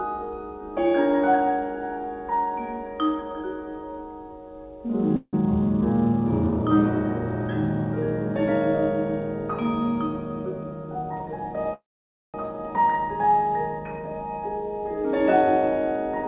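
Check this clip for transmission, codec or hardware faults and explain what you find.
Two call audio freezes are audible, heard through a telephone-band path with nothing above 4 kHz, which fits G.711 A-law at 64 kbps.

Call audio freeze at 5.16 to 5.34 s and 11.74 to 12.35 s. Packets were likely held up, emptying the jitter buffer, so the receiver stretched the last sound into a fading buzz. The first gap lasts 168 ms, ending in about 50 ms of silence. The second lasts 602 ms, mostly silent for about 530 ms. Each time the audio resumes where it stopped, with nothing lost, only delayed.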